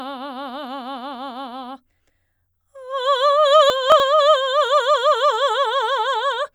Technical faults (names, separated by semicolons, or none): chunks out of order